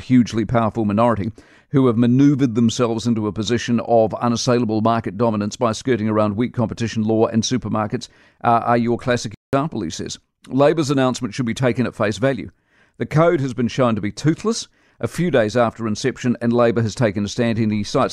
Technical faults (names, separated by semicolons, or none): playback stall